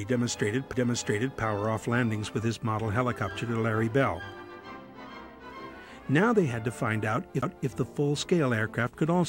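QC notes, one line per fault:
0.73 s and 7.42 s, CD skip: each event is a short tick with an almost instant dropout, a few milliseconds at 0.73 s and around ten milliseconds at 7.42 s, after which the audio carries on from a different point rather than where it left off. The laser has lost its track and landed on another turn of the disc's spiral. The player mutes briefly while it relocks, and the displaced playback position makes the audible discontinuity.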